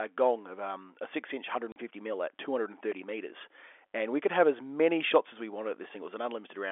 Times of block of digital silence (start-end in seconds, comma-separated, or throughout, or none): 2.92